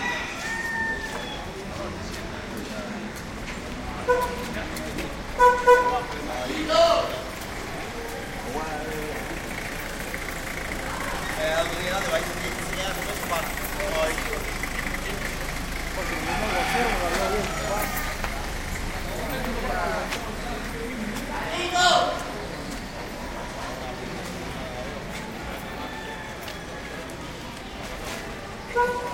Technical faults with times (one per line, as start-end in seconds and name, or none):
20.91 lost LE Audio frames